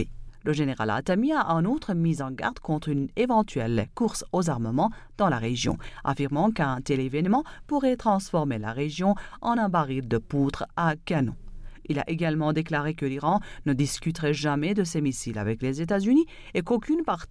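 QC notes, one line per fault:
No fault found.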